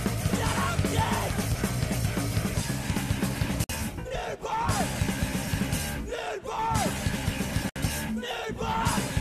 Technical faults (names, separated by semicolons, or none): gap at a join of encoded pieces